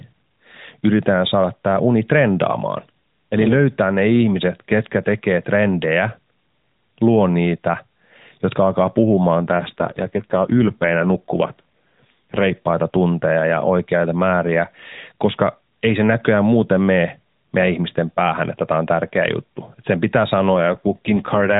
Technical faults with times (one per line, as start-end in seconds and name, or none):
9.36-12.53 AMR rate drop
20.54-21.60 AMR rate drop